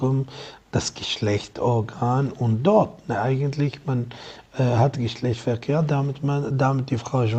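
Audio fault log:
No faults detected; signal path nominal, nothing to log.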